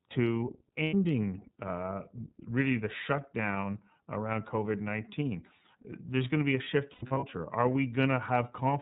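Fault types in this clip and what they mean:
iLBC codec: The whole clip passes through iLBC, a narrowband VoIP codec. Nothing above 4 kHz survives. The speech sounds clear but slightly rough and synthetic, with plainly audible coding damage. The 30 ms frames and coarse detail fit a rate near 13.3 kbps.
Lost iLBC frames: Dropped packets leave the decoder repeating the last pitch cycle mixed with noise. The gap becomes a held, buzzy vowel. A 90 ms gap appears near 0.83 s. Later, about 180 ms of losses scatter over 6.92 to 7.24 s. Speech recovers almost immediately after each.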